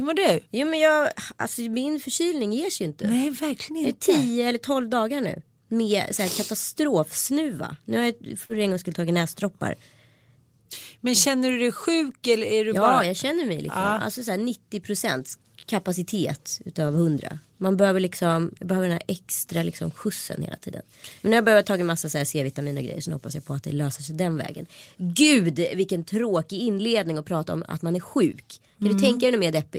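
At 8.45 to 8.51 s, between "har jag" and "en gång skulle tagit", about 40 ms of audio never arrived, and the receiver covered it with short concealed packet loss. The decoder extended the preceding sound, so the gap comes across as a brief smeared wobble.

Overlapping that, from 8.49 to 8.55 s, comes the first lost packet rebuilt from error correction. The decoder substituted low-bitrate backup copies, which gives a rougher, noisier 40 ms stretch consistent with two lost packets. The same rough, grainy patches recur at 13.87 to 13.89 s, 15.19 to 15.33 s (the longest, with 80 ms rebuilt), 16.87 to 16.97 s, 17.79 to 17.81 s and 28.31 to 28.33 s, just after "om att man är".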